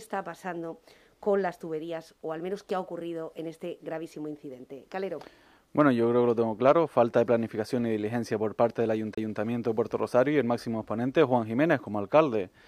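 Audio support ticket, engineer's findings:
CD skip, 9.15–9.18 s: tick, roughly 30 ms mute, then audio resumes elsewhere. Probable component: disc/laser pickup; a knock or surface flaw threw tracking onto another spiral turn.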